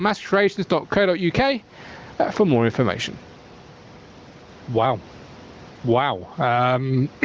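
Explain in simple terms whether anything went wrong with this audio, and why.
Gain pumping runs through the whole speech clip. The level gets pulled down on every loud sound, a big swing, so loud and soft parts end up closer together and the sound is squashed. That effect likely comes from the mic gain set far too high, with a fast limiter clamping down.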